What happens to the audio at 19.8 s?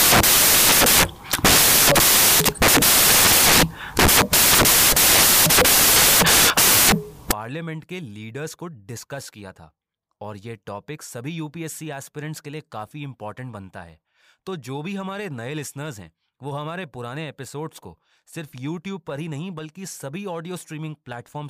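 Nothing goes wrong at 19.8 s; the speech there plays through intact, with no dropout, click, distortion or other fault.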